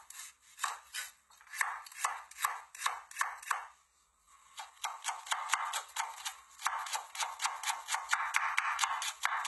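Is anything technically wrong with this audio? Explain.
Yes. Throughout the whole clip, the treble sounds bright but wrong, with a gritty, metallic sheen on the high end and a strong, hashy coarseness, even though content reaches up to about 20.5 kHz. The likely cause is HE-AAC compression at a very low bitrate, around 16 kbps. Only the lower spectrum is truly coded, and the top is synthesised by copying lower bands upward under a coarse envelope, so high harmonics don't match the original.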